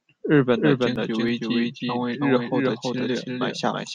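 From start to finish, every syllable of the speech is followed by a second, equally loud copy trailing about a third of a second behind, so the sound stutters and smears into itself with no sense of room or fading tail. This is a doubled audio track. The trailing copy is full-band and dry, unlike a natural echo, so the cause is likely the same signal being captured twice, with one path running late, or an edit that stacked two offset copies.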